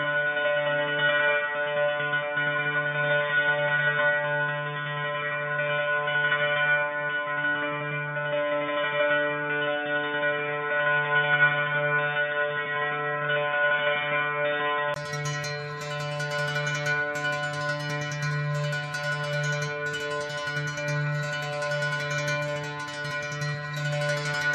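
From the start to 14.96 s the audio is band-limited, with nothing above 3.6 kHz, so it sounds dull and boxy and carries a faint noise floor some forty decibels down. At 14.96 s a 20 ms gap breaks the sound, after which the full bandwidth returns and the level shifts by around five decibels. This points to an input switched to a poorer device, with the system switching back to the better input mid-recording.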